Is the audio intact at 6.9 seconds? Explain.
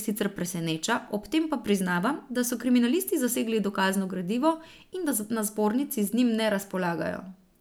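Yes, the speech at 6.9 seconds is intact, with no dropout, click, distortion or other fault audible at that moment.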